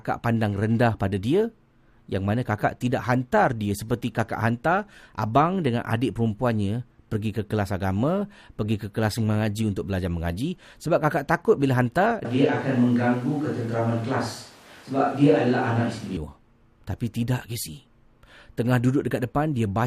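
At 12.25 s the speech suddenly turns roomy and hollow, with thinner bass. This is a switch to a distant microphone. The close microphone's signal likely dropped out, leaving a pickup further from the speaker. The room now colours the sound, and background noise sits about 30 dB below the speech. The overall level stays about the same. At 16.17 s the close, full sound returns just as abruptly.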